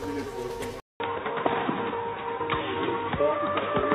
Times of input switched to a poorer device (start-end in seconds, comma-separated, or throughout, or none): 0.80-3.94